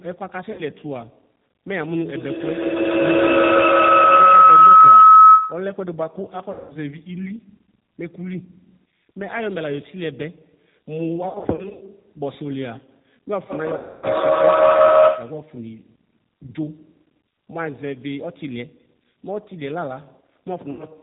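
The whole speech clip carries plainly audible G.729 coding at 8 kbit/s, which cuts everything above 4 kHz and leaves a rough, synthetic texture. VoIP packet loss concealed by the speech codec hits at 0.52 to 0.62 s (60 ms lost), 6.52 to 6.74 s (180 ms), 11.29 to 11.83 s (260 ms scattered over 520 ms), 13.77 to 14.06 s (260 ms) and 20.71 to 20.86 s (80 ms). Each gap is bridged with a stretched extrapolation that fades and stays weak briefly afterward. Feedback howl runs from 2.15 to 5.83 s near 1.5 kHz, peaking about 17 dB above the speech. It returns from 13.50 to 15.55 s near 700 Hz at about 14 dB, both with a loop delay of roughly 150 ms as a device loop regenerates.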